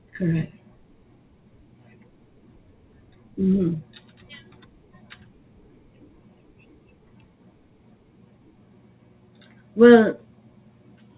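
Nothing goes wrong anywhere in this speech recording, which simply carries the narrow, band-limited character you'd expect from ordinary A-law telephone coding at 8,000 samples a second, with nothing above 4 kHz coming through.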